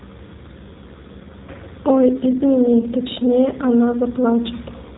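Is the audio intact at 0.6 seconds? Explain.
No. At 0.6 s, as across the whole clip, the speech carries plainly audible G.729 codec damage. The sound fits an 8 kbit/s coder rebuilding speech from a vocal-tract filter, pitch predictor and sparse pulses, so nothing above 4 kHz survives and the voice sounds rough and synthetic.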